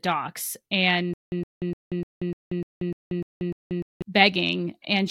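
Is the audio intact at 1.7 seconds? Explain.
No. The stream likely stalled between 1.14 and 4.02 s, replaying its last 114 ms fragment at each retry before running empty. This stutter with silent gaps repeats that burst nine times, every 299 ms, with 185 ms of digital silence between, and the intended speech is lost.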